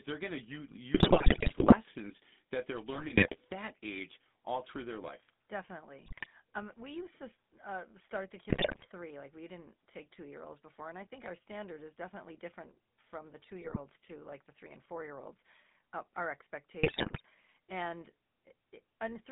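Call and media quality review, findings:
GSM full-rate codec throughout: buzzy, gravelly roughness, plainly audible, band roughly 200 Hz to 3.6 kHz. Pulse-excited vocal tract model at 13 kbps, thin excitation.

GSM bit errors at 0.94–1.77, 2.94–3.37, 6.02–6.27, 8.5–8.86, 13.62–13.79, 16.83–17.21 s: squawks, pops, gargling. Corrupted filter, pitch, gain values in decoder, worst stretch first.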